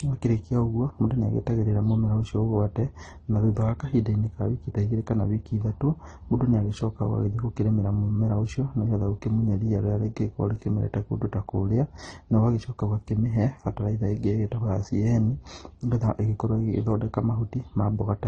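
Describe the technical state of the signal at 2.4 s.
At 2.4 s the speech has the same degraded, layered texture heard across the whole clip. Nothing is present above 9.7 kHz, so the top end is dull. The artefacts of the different codecs are heard together. This points to transcoding between lossy codecs, likely MP3, then AAC, then Opus at low bitrates. Each later encoder wasted bits re-coding the earlier artefacts and added its own. The lowest cut-off survived the chain.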